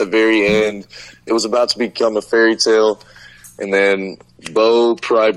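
At 1.93 s the adaptive stream switches to a lower bitrate and stays there to the end. The audio loses everything above 14.1 kHz, and codec artefacts rise. The change is abrupt, with no gap. It points to a drop from about 96 to 48 kbit/s AAC.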